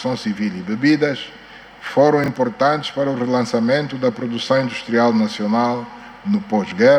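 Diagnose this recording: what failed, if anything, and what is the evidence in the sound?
What failed is chunk ordering at the buffer stage: the chunks are out of order around 2.24 to 2.28 s. Over that 40 ms span a 20 ms block plays one slot late, after the block that should follow it. Nothing is missing, but you hear a brief jumbled stutter and three hard joins where the swapped edges butt against neighbours that don't match. It sounds like a buffer handed out or wrote its chunks in the wrong sequence.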